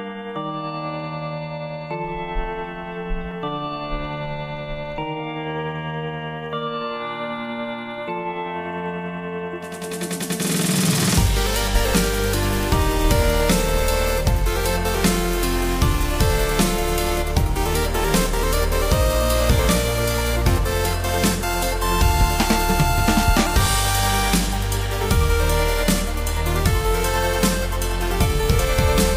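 Nothing here jumps out as a technical fault; the audio just runs along without any glitches worth pointing to.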